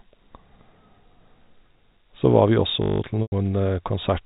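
From 2.82 to 3.0 s there's a system hang loop: the driver stalled while the hardware kept replaying one 20 ms chunk, so the speech becomes a steady 50 Hz buzz.

At 3.22 s comes packet loss with pitch repetition. About 100 ms goes missing, the last pitch period repeats and fades to silence, then the speech cross-fades back in around 3.32 s.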